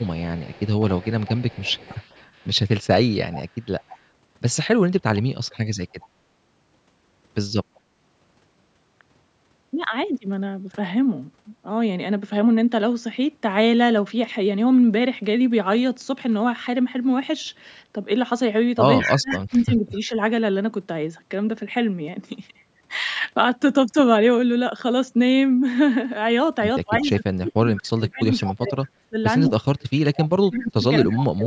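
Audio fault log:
0.0–4.01 s, 5.16–6.08 s, 7.75–7.8 s, 18.99–19.61 s, 28.44–28.54 s, 29.45–31.25 s: echo leak. A second copy of the speech trails the original by about 0.2 s, likely because a loudspeaker at the far end was picked up by its microphone and not fully cancelled. It is faint at first, about 25 dB down and about 40 dB down near 7.75 s, then much stronger, about 5 dB down near 19 s and about 10 dB down after 28 s. Unlike room reverberation, it is a distinct delayed repeat rather than a smooth decay.
19.04–20.12 s, 26.84–31.47 s: speech suppressed in double talk. The speech is pushed down in pieces while the far side's sound was playing on the loudspeaker. About 0.7 s of the first stretch is affected, with the deepest dip about 25 dB. About 3 s of the second is affected, with the deepest dip about 35 dB. This is likely an echo canceller muting both signals when it could not tell them apart.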